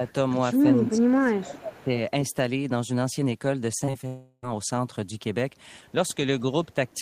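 Right at the start, 0.0 to 0.06 s, the speech dips by roughly 5 dB. That's speech suppressed in double talk, likely the echo canceller ducking the talker while the far side was also active. A faint echo leak follows at 0.08 to 0.13 s: a copy of the voice about 316 ms late, well down at around 30 dB below the speech, likely loudspeaker pickup the canceller didn't fully remove. It comes back stronger, at about 15 dB below, from 0.79 to 0.98 s.

From 0.89 to 1.89 s there's a full second of heavier double-talk suppression, with the voice dropping by as much as about 25 dB. Inside that stretch, at 1.75 to 1.84 s, another faint 316 ms echo scrap slips through.

At 3.79 to 4.05 s you get repeated packet loss, which gives that choppy, robotic sound. Short holes, the longest about 22 ms, get patched by stretching the previous sound, so nearly a third of that span is filler.

That leads straight into a long network dropout from 4.07 to 4.44 s. 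The last sound is drawn out as a fading buzz for roughly 0.36 s, then there's a brief silence before the audio resumes with that piece gone.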